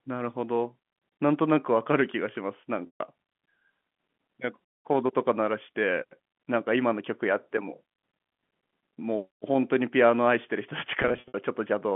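Speech over a G.711 telephone line has two stretches of packet loss with pitch repetition. At 2.86 to 3.00 s, about 140 ms of audio is missing. The decoder keeps repeating the last pitch cycle, so the voice holds with a buzzy tone, then fades. At 11.02 to 11.34 s, about 180 ms is lost in scattered gaps over 320 ms. The longest gap is 60 ms, which causes brief buzzy holds. The gap sizes fit 20 ms packets.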